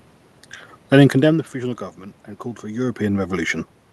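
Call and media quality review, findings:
Nothing stood out on listening to the speech, apart from the room's own background noise and the level changes of a talker moving relative to the microphone around 1 and 2.5 seconds.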